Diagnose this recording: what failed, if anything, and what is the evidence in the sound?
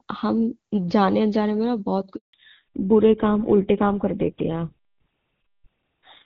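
The network stage failed during a call handover. At 2.15 s the speech dies away within a few tens of milliseconds. Silence follows until 2.33 s, a gap of 180 ms. No speech frames reached the receiver while the call moved between networks. Nothing was there to decode. Whatever was said in that window is gone. Packet loss concealment did not bridge it.

The codec stage changed next, a fallback to narrowband. From 2.33 s to the end, nothing is left above 4 kHz. The speech sounds duller and rougher than before. Before the gap, the AMR wideband (HD Voice) codec sounds clear, with faint or no coding damage. That fits its top rate of 23.85 kbit/s. After the handover, the band limit points to an older narrowband codec such as GSM full rate.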